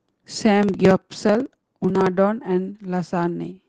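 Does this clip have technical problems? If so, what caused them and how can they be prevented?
Yes. From 0.58 to 2.13 s, a block size mismatch truncates each block. The speech buzzes at 18.1 Hz and runs 1.16 times fast, which fits 1024-sample writes. Match block sizes between stages.

At 0.90 s the level suddenly drops by about 2 dB. The call software likely stepped down the microphone volume. Disable automatic input gain control.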